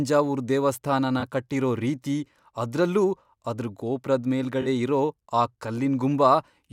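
Speech with two short dropouts from AAC frame loss with concealment, at 1.20–1.22 s and 4.61–4.67 s. The gaps, about 21 ms and 43 ms, fit one and two lost frames. The decoder covered each by reusing the last good spectrum, so each patch sounds briefly smeared and noisy. On a spectrogram each shows as a narrow vertical strip where crisp harmonic lines blur into diffuse noise, and the waveform shows a short stretch of irregular, slightly altered envelope.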